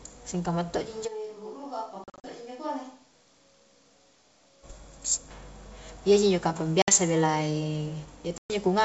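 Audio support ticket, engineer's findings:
Switch to a distant microphone, 1.09 to 4.62 s: sound abruptly turns roomy and hollow, bass thins, level drops about 10 dB, room noise rises to roughly 35 dB below the speech. Likely cause is the close mic dropping out, leaving a far pickup. Sudden change at both edges plus the hollow room tone distinguishes it from a simple gain dip.

Packet loss on an ADPCM call, 2.04 to 2.25 s: several hard-edged silent holes totalling 140 ms over 200 ms, longest 40 ms. Further holes at 6.82 to 6.92 s (60 ms) and 8.38 to 8.53 s (120 ms). The decoder's predictor and step size desynchronise, so after each gap the speech resumes slightly distorted and settles within tens of milliseconds. That recovery distinguishes it from a clean mute. The G.722 wideband coding at 64 kbit/s stays clear up to 7 kHz around these gaps.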